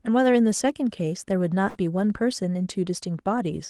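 Speech heard through a call connection whose audio tops out near 12 kHz, with coding noise consistent with Opus at about 24 kbps, has a short dropout from 1.69 to 1.78 s. The sound smears into a brief held, fading sound for about 55 ms, then jumps ahead. It is a burst of packet loss: consecutive packets never arrived in time, the receiver stretched and faded the last audio to cover the hole, and about 60 ms of speech is skipped.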